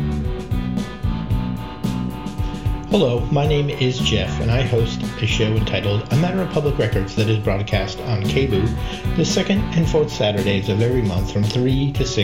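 Nothing in this audio stands out as a technical fault at any point, so there's nothing here to flag.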